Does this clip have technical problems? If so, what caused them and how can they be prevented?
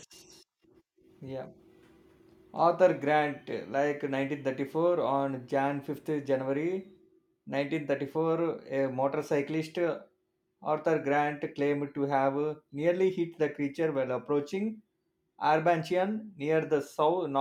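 No, no technical faults are audible.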